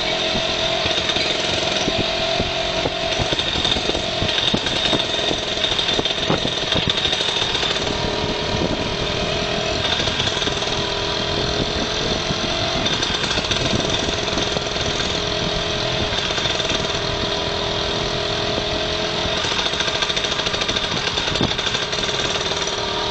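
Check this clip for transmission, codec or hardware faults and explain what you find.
No transmission, codec or hardware faults can be heard anywhere in the clip. Nothing in the audio calls for a fault explanation.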